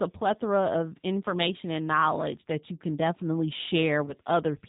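From start to finish, the speech carries plainly audible G.729 codec damage. The sound points to the G.729A variant at 8 kbit/s. This coder does not send the waveform. It rebuilds each short frame from a vocal tract filter, a pitch predictor and a few pulses. Nothing above 4 kHz survives, so the top end is missing. The speech stays intelligible but sounds rough, thin and slightly synthetic.

At 4.06 s, just after "that you can definitely", VoIP packet loss concealed by the speech codec begins. It lasts until 4.14 s. About 20 ms of audio went missing, which fits two lost 10 ms frames. The decoder filled the gap by repeating its last pitch and filter settings at falling gain. That gives a brief buzzy or noisy smear. Each frame depends on the one before, so the speech stays weak or distorted for the rest of that 80 ms stretch.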